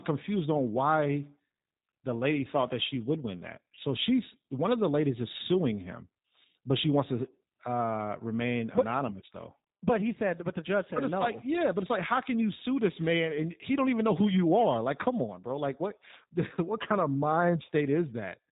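Across the whole of this speech clip the audio carries G.729 codec damage that is plainly audible. Nothing is present above 4 kHz, and the voice has a slightly rough, synthetic grain, which fits an 8 kbit/s G.729A stream that rebuilds each 10 ms frame from a vocal tract filter, a pitch predictor and a handful of pulses. This is different from ordinary low-pass filtering or a narrowband telephone line: the dullness comes with a buzzy, parametric texture rather than clean but muffled speech. At 3.75 to 3.78 s, between "she would win that" and "she's one of the", there is VoIP packet loss concealed by the speech codec. About 20 ms is missing, which points to a single lost packet. The decoder fills the gap by stretching its last pitch and filter into a buzzy tone or coloured noise that fades, and the voice stays weak or distorted for tens of milliseconds after real frames return. A dropout or a digital click would instead leave silence or a sharp transient with no tonal smear.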